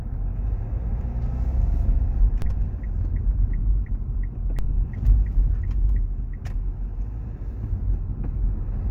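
At 2.42 s and again at 4.59 s there's a DC step: the waveform's zero line suddenly shifts by about -18 dBFS, giving a low thump each time. The offset then drains away slowly, as a 2 Hz high-pass pulls it back, while the sound carries on unaffected.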